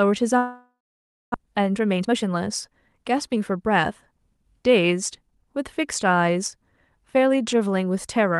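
At 0.37 s the speech gives way to a buzzy continuation of the last sound that fades out, leaving near-silence for roughly 0.57 s before speech resumes at 1.36 s. Around 0.6 s of material is simply gone, and the talker picks up mid-stream rather than where they left off. This is a long network dropout, likely caused by packets failing to arrive, with the receiver concealing the gap before falling silent.

From 1.46 s to 4.44 s the speech runs hurried, at about 112 percent of normal speed, while the pitch stays unchanged. This is a jitter buffer speed-up. After the dropout, the buffer was holding around 0.4 s more audio than its target. The receiver worked that backlog off by repeatedly cutting out short pitch-period-length pieces, trimming roughly 0.4 s in total across the span.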